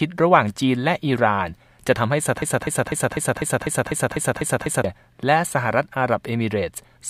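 From 2.42 s to 4.84 s the speech falls into a broken-record loop: a fragment about 0.25 s long plays ten times in a row, identical each pass, with no gap between repeats. The result is a mechanical stutter that holds the same sliver of sound for over two seconds. This most likely comes from a stalled player or stream re-sending its last held buffer, so the speech that belonged in that stretch is missing.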